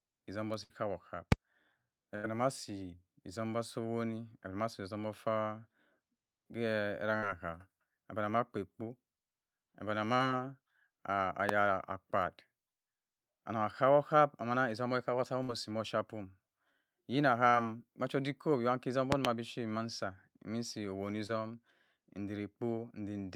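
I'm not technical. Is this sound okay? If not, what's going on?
No. The speech has three kinds of fault.

The first is a burst of packet loss, at 0.63, 2.16, 7.17 and 15.43 seconds. Each time, a run of the call's data arrived too late or not at all. The receiver stretched the last sound to cover the gap, which you hear as a brief held buzz or fading hiss, and then jumped ahead. Between 40 and 80 milliseconds of speech are simply gone at each spot.

The second is a loud pop, at 1.32 and 11.49 seconds, and a double pop between 19.12 and 19.27 seconds. These are sharp clicks or thumps that stand well above the speech, while the talking continues underneath. The likely cause is a sudden electrical jolt, such as a plug being moved, a switch, static or a brief glitch in the audio hardware or driver.

The third is short concealed packet loss, at 10.16 and 17.49 seconds, and at 21.27 seconds just after "mi nsi owoni". 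Here only a tiny piece of the call went missing, about 20 to 40 milliseconds. The receiver patched it by imitating the sound just before and then blending back. That leaves a quick smear or wobble, and a short consonant can drop out.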